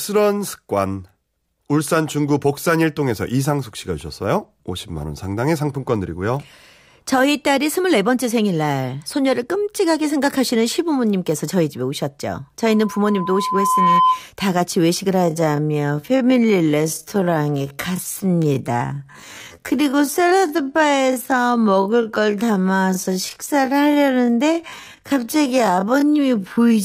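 At 12.65 s a loudspeaker feedback squeal begins: a 1 kHz tone swells over about a second and a half to roughly 5 dB above the speech, then stops at 14.24 s. The spectrogram shows a single bright horizontal line.

From 15.12 s to the end, the speech runs at about 0.54 times its normal pace with unchanged pitch, sounding dragged. This is likely a time-stretched section. The spectrogram shows drawn-out shapes.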